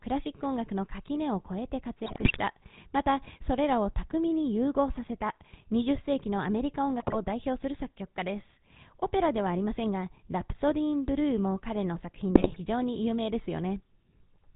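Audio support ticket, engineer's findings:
GSM full-rate codec, throughout: buzzy, gravelly voice, nothing above 4 kHz. Pulse-excited vocal-tract model at what fits 13 kbps. The roughness, not just the lost top end, separates it from plain band-limiting.

GSM bit errors: squawks, pops and gargling at 2.06–2.41 s, 6.99–7.16 s and 12.34–12.57 s. Corrupted filter, pitch and gain values warp the spectrum or spike the level. Bursty and brief, unlike the steady codec buzz.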